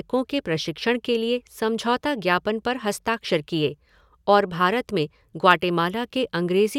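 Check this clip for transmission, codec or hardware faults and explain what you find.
No transmission, codec or hardware faults.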